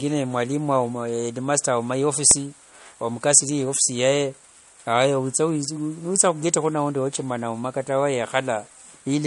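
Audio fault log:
throughout: low-bitrate audio saved at a high bitrate. Nothing above 11.1 kHz, a cut-off likely left by an earlier low-rate MP3 pass that re-encoding cannot restore.
2.31 s: underrun with held sample. Output briefly froze at its last value for 0.67 ms, which fits a 32-sample gap; playback resumed in place, so it ends softly.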